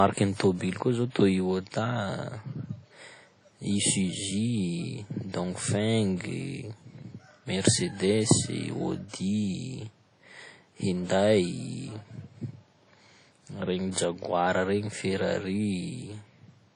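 From start to finish the speech carries WMA compression artefacts, plainly audible: a ringing, washy quality with hiss that breathes with the signal, and nothing above about 10.1 kHz. This likely comes from a simple WMA encoder at a low bitrate, around 32 kbps, with weak detail zeroed.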